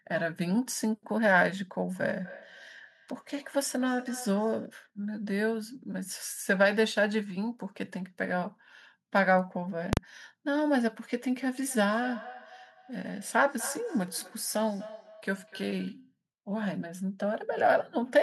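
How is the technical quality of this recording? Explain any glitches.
The recording has two clear problems: a repeating echo in two stretches and one sudden bang.

From 1.91 to 4.77 s, and again from 11.53 to 16.05 s, there is feedback echo between two devices. Two devices on one call sit in the same room. One plays back what the other's microphone captured, and that microphone hears it again. Neither echo canceller removes the other device's output. The speech returns roughly every third of a second. Each pass is thinner and more ringing. The echo peaks at about 18 dB and 16 dB below the speech.

From 9.93 to 9.97 s, the audio jumps to invalid numbers at full scale. A calculation produced infinite or undefined values. These were forced to the largest possible level for a 40 ms block. Because the block is so short, it is heard as one sharp, very loud bang. Nothing else can be heard through it.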